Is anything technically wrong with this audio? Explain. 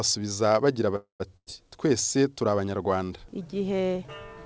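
Yes, there are two faults. A call audio freeze runs from 0.96 to 1.27 s. The sound stretches into a fading buzz or hiss and then about 130 ms of silence, before resuming where it stopped with nothing lost. The likely cause is delayed packets draining the jitter buffer. Next, a burst of packet loss at 1.37 to 1.48 s drops about 100 ms. The receiver fills the gap with a fading continuation of the last sound before the audio jumps ahead. Both faults come through a call codec with nothing above 8 kHz, which fits G.722.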